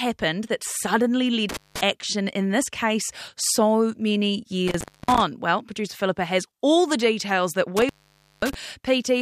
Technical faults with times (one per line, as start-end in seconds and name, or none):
1.49-1.81 intermittent contact
4.68-5.22 intermittent contact
7.77-8.54 intermittent contact